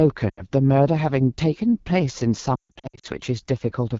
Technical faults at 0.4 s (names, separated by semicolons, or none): AMR wideband (HD Voice) codec; lost AMR speech frames